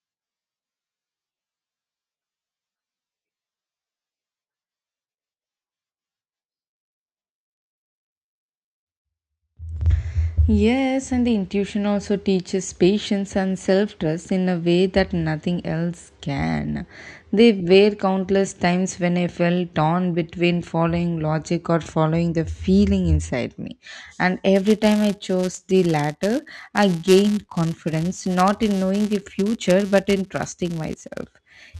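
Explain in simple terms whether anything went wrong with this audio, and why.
From 24.54 s to the end at 31.79 s, a filter restarted on every block. It forgot its state between short chunks of audio and began each from silence. Each restart leaves a tiny tick, and together they form a 188 Hz buzz, which fits 256-sample chunks, that swells and fades with the speech.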